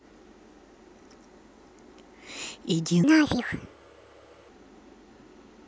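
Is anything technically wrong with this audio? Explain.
Yes. A section at the wrong speed runs from 3.04 to 4.49 s. The speech there plays about 1.53 times faster than recorded, likely because that stretch was fitted to the wrong clock, so the voice jumps roughly seven semitones higher and sounds hurried before snapping back.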